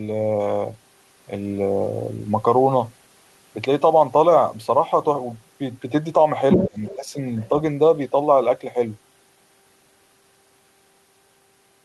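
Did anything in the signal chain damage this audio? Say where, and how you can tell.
Yes, in call processing. The other side's voice leaks through at 6.52–6.68 s, about as loud as the speech. Fainter scraps follow at 6.85–6.96 s and 7.37–7.49 s, well below it. An echo canceller likely left loudspeaker sound in the microphone signal.

Speech is also suppressed in double talk between 6.57 and 7.15 s. The voice dips in pieces, by around 20 dB at worst, for about a third of a second in all. Both sides overlap here. The canceller likely could not separate them and turned both down.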